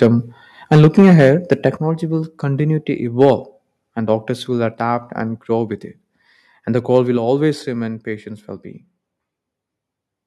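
Speech with a harsh, crackling edge on the loudest moments: at 0.01 to 0.07 s, from 0.71 to 1.66 s just before "will continue to", at 3.21 to 3.31 s right after "will continue to", and briefly at 6.95 to 6.98 s, with peaks pushed up to about 9 dB over the limit. This is microphone overload, likely an input level set so high that the converter flattens the tops of the waveform. The voice and background also drop abruptly in level at 0.76, 1.77, 4.74 (between "and doctors will" and "and grow with it") and 7.17 s, by about 2 to 6 dB each time. This is microphone volume stepped down, likely the call software cutting the device's input gain in single steps after it detects those clipped peaks.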